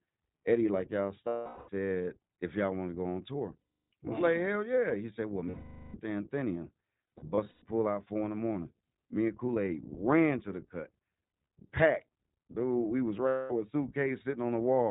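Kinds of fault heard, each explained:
iLBC codec: narrowband coding in 20 ms frames removes everything above 4 kHz and leaves a rough, synthetic grain, unlike simple low-pass filtering, which stays smooth.
Lost iLBC frames: six gaps, about 180 to 460 ms, filled with a held, buzzy vowel that fades, then the voice is right again almost at once, unlike silent dropouts or clicks.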